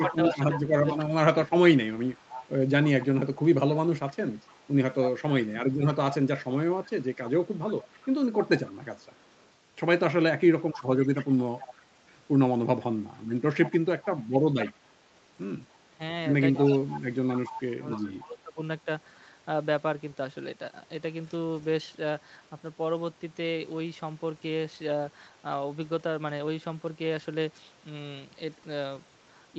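Right from the start, 0.0 to 9.48 s, there's an echo leak: a delayed copy of the speech trailing about 290 ms behind and sitting about 15 dB down. That's likely a far-end loudspeaker whose echo canceller let some of its mic pickup back through. Inside that stretch, at 0.03 to 0.98 s and 5.58 to 5.95 s, you get speech suppressed in double talk. The speech ducks by up to about 20 to 25 dB in short bites while both sides overlap, likely as the canceller clamps down on everything. It happens again at 10.7 to 11.19 s, and then the echo pops back from 11.19 to 11.84 s, a little fainter at about 20 dB below. The longest overlap runs 13.28 to 18.58 s, with roughly two seconds of dips, and the 290 ms echo leaks through at 13.62 to 18.24 s. A last, very faint trace of echo turns up at 21.25 to 21.64 s, around 40 dB down.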